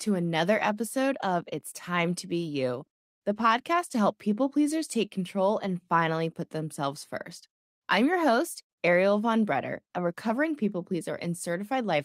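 No technical faults can be heard anywhere in the speech. Nothing in the audio points to a problem in how it was captured, processed or delivered.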